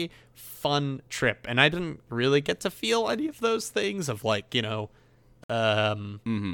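A likely Bluetooth stall, with the headphone buffer running dry, drops the speech to silence for 58 ms at 5.44 to 5.50 s, just after "of like you know".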